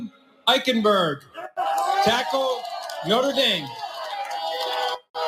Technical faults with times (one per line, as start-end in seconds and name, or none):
0.00-5.28 noise suppressor applied to music or sounds
0.05-0.47 sound cut by the noise suppressor
1.17-1.58 sound cut by the noise suppressor
4.98-5.18 sound cut by the noise suppressor